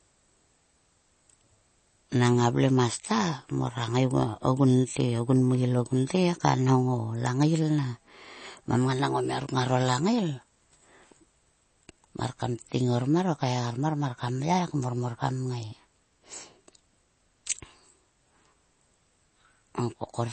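A speech recording, most likely squeezed through a low-bitrate MP3 encoder, around 32 kbps by the sound of it, showing MP3 compression throughout. With too few bits, the treble is cut off above about 8.3 kHz, and weak frequency components flicker in and out, giving a watery, swirling texture with metallic chirps on s sounds and smeared onsets.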